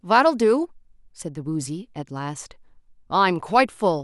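Nothing stood out as a technical fault on listening to this speech recording.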